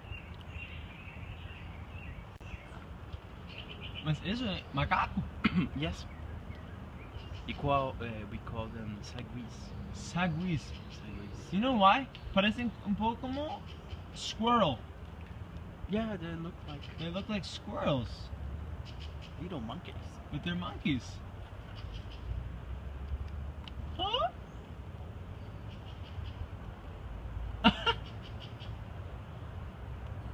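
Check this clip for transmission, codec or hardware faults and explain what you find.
One hardware fault stands out: an intermittent contact from 2.35 to 2.42 s. A loose plug or cable briefly opens, dropping the signal for about 37 ms with crackle at each edge. The waveform shows a near-flat gap bracketed by sharp spikes, and the spectrogram shows broadband vertical streaks around faint hiss.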